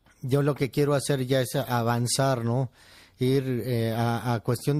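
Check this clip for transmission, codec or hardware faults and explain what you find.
One codec fault is audible. Throughout the speech there is plainly audible damage, likely from MP3 compression: bit starvation, consistent with roughly 64 kbps, truncates treble and toggles weak frequency lines, giving watery, swirly sibilants and smeared onsets.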